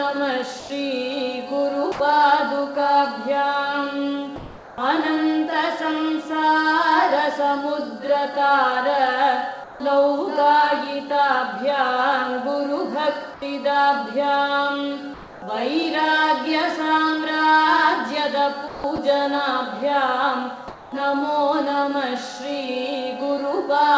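At 0.60 s, 1.92 s and 9.64 s the sound drops out for 70 to 80 ms. Steady flat noise fills each gap for 0.08 to 0.16 s. This is sound dropped by the voice detector. The sender likely judged real sound to be background and stopped sending.

Comfort noise in place of the background appears at 4.36 to 4.78 s, 13.34 to 13.42 s, 15.14 to 15.42 s and 20.68 to 20.92 s. The detailed background, about 20 dB below the loudest sound, becomes smooth, featureless hiss. That hiss is about 1 to 4 dB quieter. The likely cause is discontinuous transmission during pauses, with synthetic noise played at the receiver.

From 18.68 to 18.98 s the sound is chopped by the voice detector. Sending likely switched off and on more than once. About 180 ms is replaced by comfort noise. Across the clip nothing is heard above 8 kHz, as expected from a G.722 call path.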